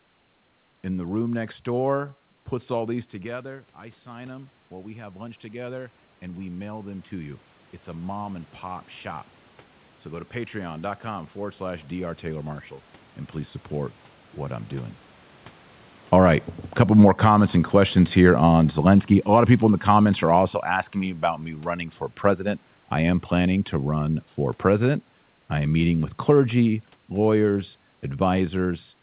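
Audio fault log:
3.22–12.69 s, automatic gain rising: just after "door puts all these" the talker drops about 15 dB at the mic, and the gain control slowly climbs back about 14 dB until "and please support what", so the voice and the room noise behind it swell up together.
15.97–20.56 s, automatic gain falling: the talker comes in louder around 16 s, the gain control eases off about 7 dB, and the voice sinks back with its room noise before "asking me about me", all over the band-limited sound of a G.711 call line that has nothing above 4 kHz.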